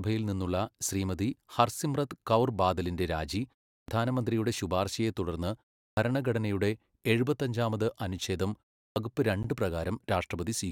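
At 3.77 s after "ഹർസിമ്രത് കൗർ ബാദലിന്റെ രാജി", 5.86 s after "ശുപാർശയെ തുടർന്ന്", and 8.85 s after "തുടർന്ന് ഭരണഘടനയുടെ എഴുപത്താഞ്ചാമത് അനുഛേദം", there is a clipped start after a pause. Each time, after roughly 0.3 s of silence, the output device is still waking and swallows about 110 ms of onset, so the speech begins abruptly. At 9.43 s a gap between stream segments appears: mismatched segment timestamps leave a hard-edged hole of silence about 15 ms long, with no audio lost.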